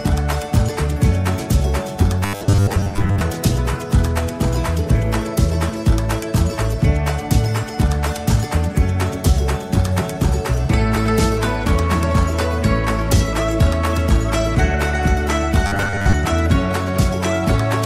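From 2.25 to 3.21 s and again from 15.67 to 16.15 s, the sound turns into a rigid metallic buzz at 100 Hz. This is robotic sound from repeated short buffers, likely from a 10 ms chunk replayed while most new audio was skipped.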